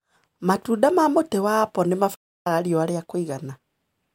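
A playback stall at 2.15 s cuts this speech clip silent for about 0.3 s after "ma mũtĩ wa apple", resuming at "riũa ria", likely because the player's buffer ran dry.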